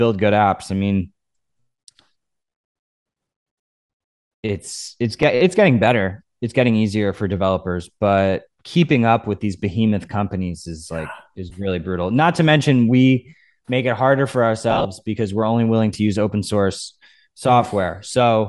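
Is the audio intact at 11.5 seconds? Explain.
No. Between 11.50 and 11.52 s, just after "behemoth companies is like" and before "really brutal", a Bluetooth LE Audio packet went missing. The gap fits one lost 10 ms frame. The LC3 decoder covered it by replaying the previous frame's spectrum with scrambled phase, so the sound there turns into a brief, noisy smear instead of a clean continuation. It is short enough that it comes across as a tiny rough blip rather than a dropout to silence.

That moment also carries the same grainy, breathy coloration heard across the whole clip, likely from Bluetooth LC3 compression that fits about 48 kbps with 10 ms frames. At that rate the encoder discards much of the upper spectrum and replaces it with filled-in noise, which gives the speech its plainly audible hiss-edged, papery quality in the high frequencies.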